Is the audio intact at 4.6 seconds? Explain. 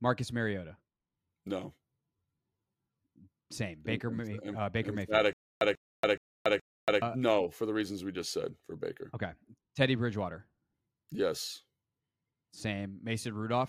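Yes, the speech at 4.6 seconds plays through intact, with no dropout, click, distortion or other fault at that moment.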